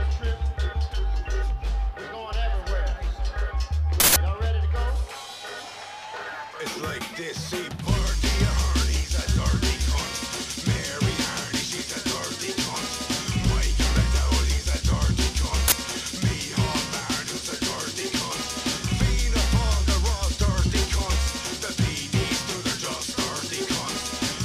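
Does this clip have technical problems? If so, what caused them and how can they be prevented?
Yes. Twice, an uninitialised buffer reached the output before any audio had been written into it, so whatever stale memory it held was played as samples. The result is a sudden, loud crack or burst of digital noise with no relation to the surrounding sound, from 4.0 to 4.16 s (a 160 ms block) and from 15.68 to 15.72 s (a 40 ms block). Prevent this by zero-filling every buffer on allocation and outputting silence whenever a block isn't ready in time.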